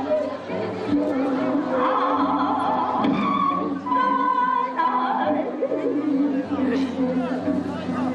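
Nothing stood out on listening to this audio.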